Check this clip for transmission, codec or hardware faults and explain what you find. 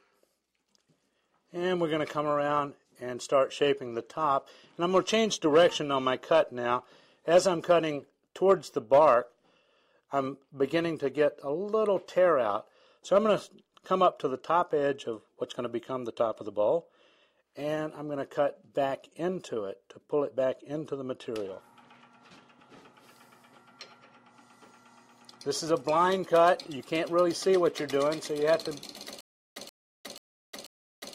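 One fault: a stutter with silent gaps from 29.21 s to the end. The stream likely stalled, and each retry replayed the last 130 ms fragment before running dry, so that burst repeats four times, every 486 ms, separated by 356 ms of digital silence, and the intervening audio is lost.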